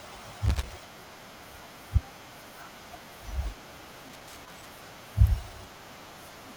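A worn or dirty contact somewhere in the signal path, most likely a plug or jack, is making and breaking as it shifts, producing loose connector crackle in this speech recording. Each intermittent break chops the signal, so the audio turns into an irregular, scratchy burst of crackle. It happens twice, from 0.46 to 0.73 s and again, for longer, from 4.09 to 4.68 s.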